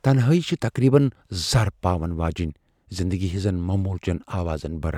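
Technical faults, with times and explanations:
No technical faults are audible anywhere in the recording.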